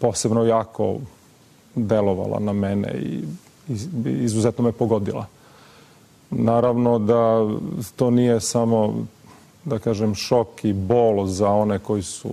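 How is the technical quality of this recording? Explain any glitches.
One glitch stands out: a skipped compressed frame at 7.56 s. About one frame of audio goes missing, around 20 ms, which fits a 24 ms codec frame. The decoder never played it, either because it was lost or because it was rejected as damaged. The sound jumps ahead.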